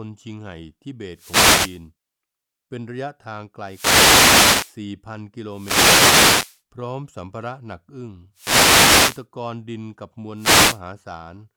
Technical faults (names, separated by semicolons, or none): wireless microphone noise hit